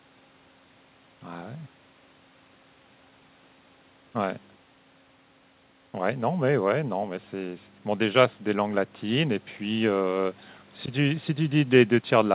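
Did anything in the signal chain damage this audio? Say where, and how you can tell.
No, nothing in the chain damaged this speech: the call path is behaving as designed, and the absence of anything above 4 kHz is simply the normal narrowband ceiling of the G.711 mu-law codec at 64 kbps.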